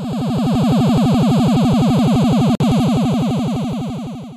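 Separately encoded pieces were joined at 2.55 s without trimming the encoder delay and end padding, leaving a gap at a join of encoded pieces. Continuous sound drops into about 51 ms of silence with smeared edges, then resumes where it stopped at 2.60 s.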